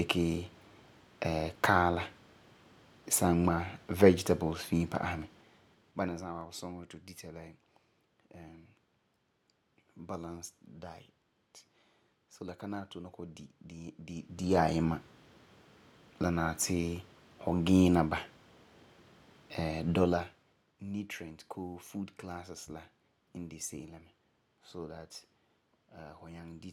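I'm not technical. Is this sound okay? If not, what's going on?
No. The speech has zipper noise. Its volume moves in small, ticking jumps instead of smoothly: down at 5.16 to 6.51 s, then up faster at 14.06 to 14.61 s.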